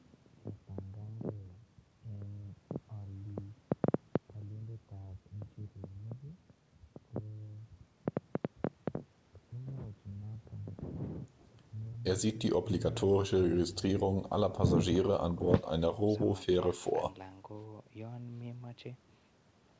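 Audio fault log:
The speech arrives over a call path working as intended, with no energy above 8 kHz, which points to a wideband call codec such as G.722 running at around 64 kbps.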